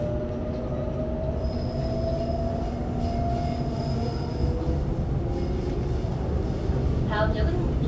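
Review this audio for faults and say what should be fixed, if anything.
Nothing needs fixing: the signal holds steady throughout, with no dropouts, level problems or other technical faults to correct.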